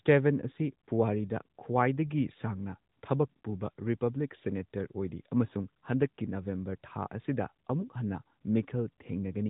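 No technical faults can be heard in the speech, which has passed through the AMR narrowband mobile codec with light damage consistent with its 12.2 kbps mode and carries nothing above 3.8 kHz.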